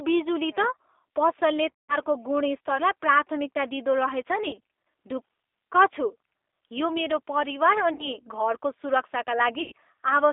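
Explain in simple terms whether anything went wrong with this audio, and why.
The whole recording passed through the G.729 codec, a phone-call codec that rebuilds the voice from a simplified model. Everything above about 3.6 kHz is gone, and the voice sounds noticeably rough and synthetic.

VoIP packet loss, concealed by the speech codec, occurs at 1.78–1.97, 4.49–4.57, 7.93–8.16 and 9.62–9.72 s. Pieces of the call never arrived, so the decoder stretched the previous sound into a brief, fading buzz or noise.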